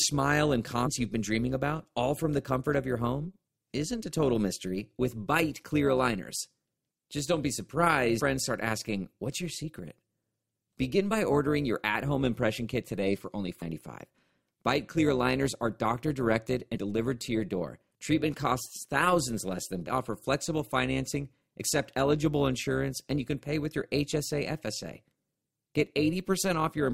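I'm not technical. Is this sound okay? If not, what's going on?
No. Overlap-add ripple runs through the whole recording: the speech was chopped into overlapping slices and rejoined unevenly, so loudness wobbles about 200 times a second, giving a rough, robotic buzz.

Damaged data in a compressed stream causes brief glitches at 0.85 to 0.87, 8.19 to 8.21, 13.61, 16.75 to 16.77 and 19.86 seconds. Corrupted bits confuse the decoder, which misreads the sound at those moments.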